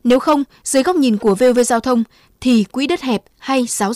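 Hard clipping runs through the whole speech clip. The signal is driven about 8 dB past what one stage can pass, so the loudest peaks are sliced flat. Only a small share of samples, around two percent, hit the ceiling. Those flat tops add high harmonics, heard as crackle and rasp on loud syllables.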